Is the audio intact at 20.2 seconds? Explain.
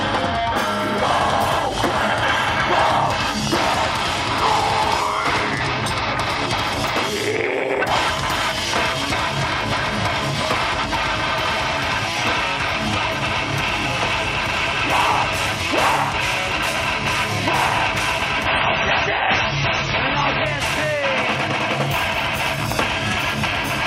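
No. At 20.2 seconds the clip sits inside a switch to an adaptive stream at a lower bitrate, from 18.46 to 20.46 s. The player fell back to a cheaper encoding, which fits MP3 dropping from 128 to 24 kbit/s. Nothing above 8.8 kHz survives. Codec artefacts rise, with no gap at either edge.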